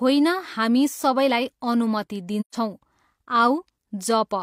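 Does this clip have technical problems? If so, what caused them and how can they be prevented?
Yes. AAC frame loss with muting occurs from 2.40 to 2.55 s. Data went missing in transmission or storage, and the decoder replaced the lost spectrum with silence, a stretch of about 128 ms that fits three lost frames. Because AAC blocks overlap, the speech fades down into a soft-edged hole and fades back up as good frames resume. Forward error correction, retransmission or frame-loss concealment that rebuilds the missing spectrum would prevent the gap.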